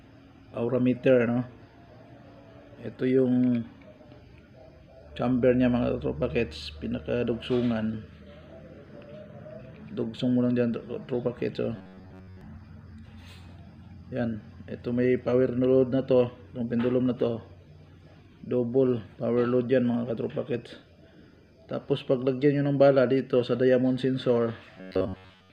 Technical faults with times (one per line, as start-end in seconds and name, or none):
11.76-12.41 robotic sound from repeated short buffers
24.77-25.52 robotic sound from repeated short buffers